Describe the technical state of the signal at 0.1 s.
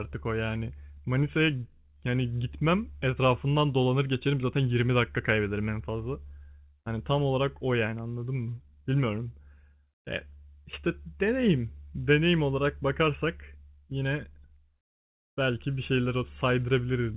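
At 0.1 s the signal is intact, with only the narrow telephone band of the call path audible there, nothing reaching above 4 kHz.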